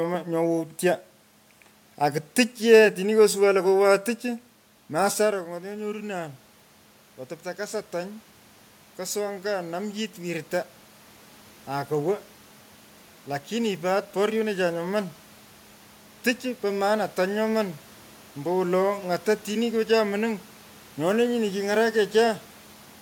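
From 7.56 to 10.53 s the voice and the room noise swell together, about 4 dB louder over three seconds. This is automatic gain rising: the input fell about 13 dB after the talker moved back around 5 s, and the gain control slowly compensated.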